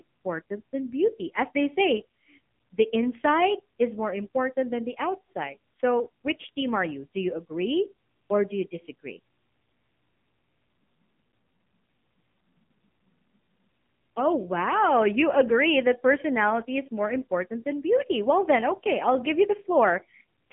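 From start to finish the speech carries AMR narrowband mobile codec damage. Nothing survives above about 3.8 kHz, and the useful band runs roughly 150 Hz to 3.6 kHz. A simple telephone band filter would only sound muffled. Here the voice is also rebuilt from a vocal-tract model driven by sparse pulses, so it turns buzzy and synthetic. That heavy coloration points to a low AMR-NB mode, around 6.7 kbps.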